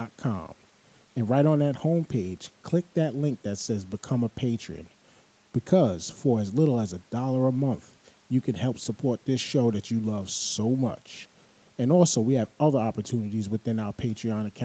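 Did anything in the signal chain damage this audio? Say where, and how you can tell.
No, nothing damaged this audio.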